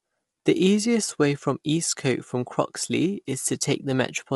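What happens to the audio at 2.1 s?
At 2.1 s the speech carries plainly audible coding damage, present throughout the clip: a rough, grainy texture with nothing above 11.7 kHz. That points to low-delay AAC compression, likely AAC-ELD at a low rate around 32 kbps, which quantises the spectrum coarsely. A simple low-pass filter would remove the top band cleanly, without this grain.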